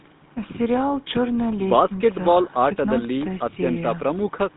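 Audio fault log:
Throughout: GSM full-rate codec. The speech has a plainly audible buzzy, gravelly roughness. Nothing reaches above about 3.8 kHz, and the band sits roughly between 150 Hz and 3.7 kHz, so it sounds like a phone line. The codec models the vocal tract and excites it with a coarse train of regularly spaced pulses. Much of the fine detail in that excitation is discarded, which causes the grit. The damage fits the 13 kbps GSM full-rate standard.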